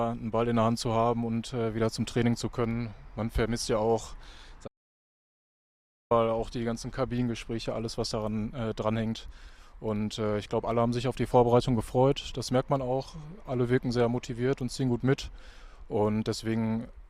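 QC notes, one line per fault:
4.68–6.11 s audio dropout to silence: sound cuts to complete silence with no room tone for 1.43 s, likely from an input lost while recording continued.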